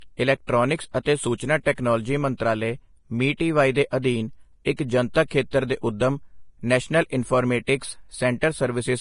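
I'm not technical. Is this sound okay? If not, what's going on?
No. Throughout, the speech sounds grainy and hissy with smeared consonants and nothing above 10.6 kHz, likely from heavy Vorbis compression. Unlike steady background hiss, this grit follows the voice itself.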